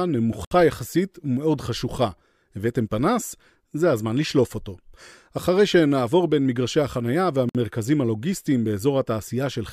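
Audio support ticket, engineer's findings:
Gap at a join of encoded pieces: two silent holes in continuous speech, 0.45–0.51 s (about 66 ms) and 7.49–7.55 s (about 56 ms). Probable component: the concatenation step, with separately encoded segments joined untrimmed. Encoder start delay and last-frame padding are left in. Edges are smeared by the codec, and speech resumes exactly where it stopped. Unlike a network dropout, nothing is lost or concealed, only extra silence is inserted.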